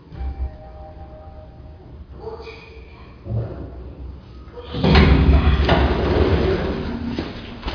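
No technical faults can be heard anywhere in this recording of sounds.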